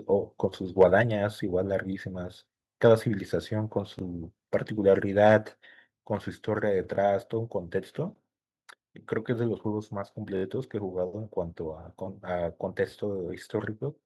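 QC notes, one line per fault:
0.81–0.84 s, microphone overload: for about 30 ms the loudest peak pushes roughly 2 dB past the converter's limit, and the tops of the waveform are cut off. That squared-off peak is heard as a short harsh crackle on the syllable. On the waveform the tips are flattened; on a spectrogram a brief vertical smear of added high harmonics appears above the speech. The likely cause is microphone input gain set too high.
1.02 s and 5.85 s, microphone volume stepped down: the level of both the speech and the background falls abruptly, by about 2 dB at 1.02 s and by about 4 dB at 5.85 s. The first step comes just after the overloaded peak, which fits call software reducing the device's input volume in single jumps. On the waveform the envelope drops at a clean edge, and on a spectrogram the whole band darkens at that instant.
3.99 s, 6.96 s and 10.37–10.43 s, repeated buffer: a 21.33 ms block of audio, which fits a 1024-sample playback buffer, is played again because the next block arrived late. 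It plays twice at 3.99 s and 6.96 s, and four times at 10.37–10.43 s. Each repeat is heard as a short stutter with a hard join at each repeat. On a spectrogram identical slices sit side by side with sharp vertical seams.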